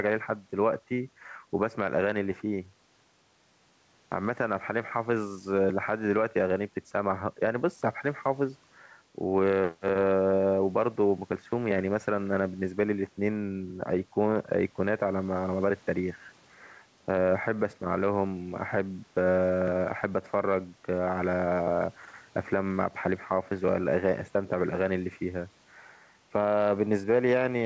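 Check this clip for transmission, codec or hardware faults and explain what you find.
One fault runs through the whole clip: gain pumping. The likely cause is input gain set far too high, with a fast limiter or compressor clamping the level each time the speech gets loud. The gain swings by roughly 5 dB, pulling down under each loud syllable. Loud and quiet passages sit unnaturally close in level, giving the speech a squashed, flattened quality. The call codec's upper limit is audible as nothing above 8 kHz.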